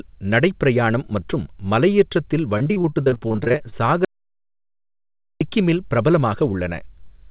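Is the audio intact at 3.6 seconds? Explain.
No. At 3.6 s the sound is inside a stretch of repeated packet loss (robotic sound) running from 2.58 to 3.74 s, just after "நடைப் பிரயாணம் மற்றும் மலையேற்றத்தில்". Many short holes, none longer than 26 ms, are patched by extending the previous sound. This makes it choppy, with pieces missing, rather than producing one clean dropout.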